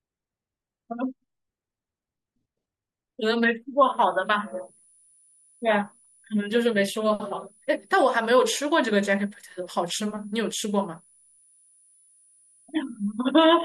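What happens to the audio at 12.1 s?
At 12.1 s you're hearing a switching supply whistle, a thin tone around 10 kHz, sitting roughly 35 dB under the speech. It wanders between about 9.8 and 10.1 kHz, which is what you get when a power supply drops into an audible burst mode or beats against another supply. It comes in at 3.83 s and runs right to the end.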